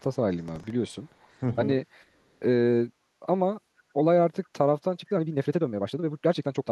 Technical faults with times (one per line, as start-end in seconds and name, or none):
0.38-1.39 echo leak
0.48-0.70 processor overload crackle
4.44-4.48 echo leak
4.96-6.71 time-stretched section